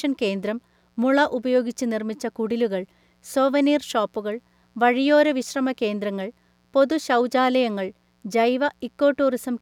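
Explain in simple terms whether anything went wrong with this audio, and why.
Something in the recording chain let electrical noise from the power supply leak into the audio, a fault called mains buzz. A dimmer, a power rectifier or an unshielded cable picks up sharp switching spikes from 60 Hz mains power, twice every cycle, and those spikes carry a stack of tones up to a few kHz. You hear it as a faint, steady, raspy buzz under the speech, present from the first second to the last.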